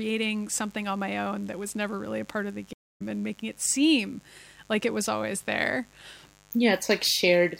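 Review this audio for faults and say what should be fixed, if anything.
A mains buzz runs through the whole clip: a steady, raspy buzz built on 50 Hz, sitting roughly 30 dB below the speech. Sharp switching spikes, from a dimmer, a rectifier or an unshielded line, get into the signal path twice every mains cycle, so harmonics of 50 Hz stack up well into the kilohertz range. That bright, rasping edge is what separates it from plain hum, which is a smooth, low tone. To prevent it, keep dimmers and rectifying supplies off the audio circuit and use shielded, properly grounded cabling.

A stream reconnect breaks the audio from 2.73 s to 3.02 s. The connection dropped, the player fell silent for about 0.24 s, then reconnected and started a fresh decoder partway through the stream. Speech resumes roughly a fifth of a second further on than where it stopped. That forward skip in the material is what distinguishes it from an ordinary dropout, which leaves a gap but keeps the timeline intact. 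To prevent it, give the player a larger network buffer and a more stable connection to the server.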